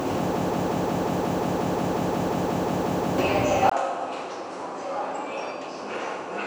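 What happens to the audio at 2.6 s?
At 2.6 s the audio is stuck in a broken-record loop. It runs from 0.36 s to 3.18 s. A fragment of about 179 ms repeats exactly, back to back, 16 times. The stall is likely in the player, encoder or stream, which kept resending its last piece. The audio meant for that span is lost.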